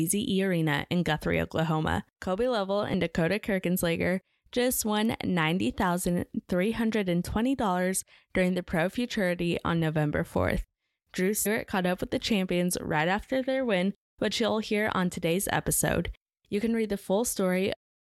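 Damaged data in the compressed speech stream makes the decoder misread frames, lose sync and hunt for the next frame header. It is heard as a brief glitch at 2.93 s, and again at 11.45 s, just before "caught up with the".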